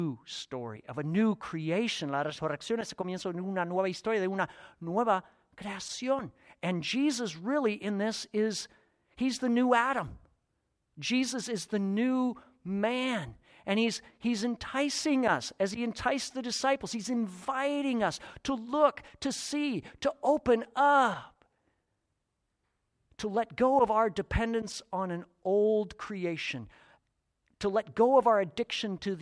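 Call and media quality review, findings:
No audible faults found.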